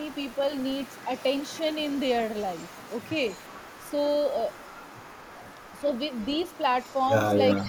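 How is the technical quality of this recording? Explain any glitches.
The recording has two related faults from a speakerphone path, both in echo handling.

Echo leak, from 0.0 to 2.0 s, 2.4 to 3.92 s, 4.5 to 7.07 s and 7.5 s to the end: the echo canceller likely failed to remove loudspeaker pickup, so the speech returns about 394 ms late, at about 25 dB below the direct sound, rising to about 15 dB below in the final stretch.

Speech suppressed in double talk, from 7.63 s to the end: with both sides active, the canceller likely mistook the talker for echo and turned everything down. The speech dips by up to about 10 dB for a very brief moment.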